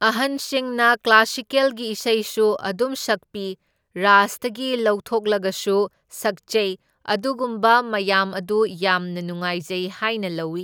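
No technical faults can be heard anywhere in the speech.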